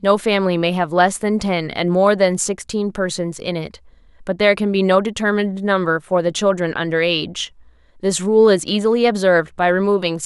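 No technical faults detected anywhere in this speech recording.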